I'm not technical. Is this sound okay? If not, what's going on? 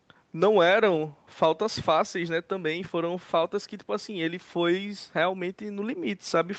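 Yes, nothing stood out as a problem when I listened to this speech recording.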